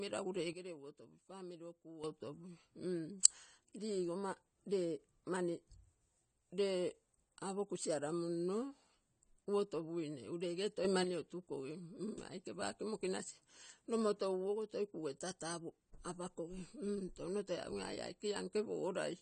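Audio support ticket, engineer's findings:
Dull, smeared speech for the whole clip, sibilants fizzy and warbling, nothing above 9.1 kHz. Likely AAC compression (AAC-LC) at a low bitrate, with damage plainly audible and a bandwidth that fits about 32 kbps. Encoder quantises spectral lines coarsely, lowers the cut-off, and leaves spectral holes.

Sudden drop in level, speech and noise floor together, 0.53 to 2.04 s, about 11 dB down, then straight back up. Short step up of about 6 dB at 10.85 to 11.04 s. Likely a sudden gain jump: digital gain stage switching per sample with no ramp.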